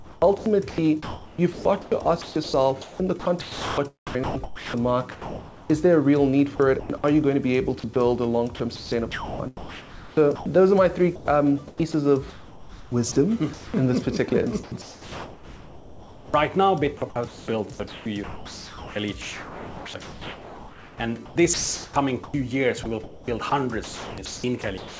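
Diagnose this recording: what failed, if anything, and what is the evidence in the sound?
In call processing, the sender's voice activity detection kept toggling transmission, likely because quiet passages fell below its threshold. The result is sound chopped by the voice detector at 0.0–5.7 s, 6.56–7.04 s, 8.56–10.46 s, 11.16–13.74 s, 14.30–16.34 s and 17.10 s to the end. There, real sound alternates with comfort noise, so the audio turns choppy.

At 7.80–7.84 s the detector briefly stopped sending altogether, likely mistaking a faint edge of the sound for background. This is sound dropped by the voice detector. About 20 ms of audio gives way to steady comfort noise before transmission resumes, all heard through a call path with nothing above 8 kHz, which fits G.722.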